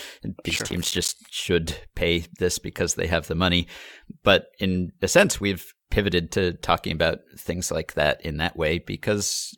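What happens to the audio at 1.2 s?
Right at the end of a processor overload crackle, 0.50 to 1.18 s: missed buffer deadlines leave tiny silent gaps, heard as gritty tearing, clearing before "should pay this because".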